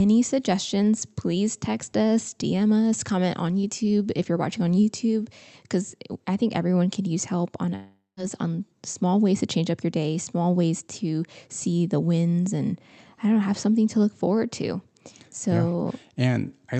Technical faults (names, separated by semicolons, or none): long network dropout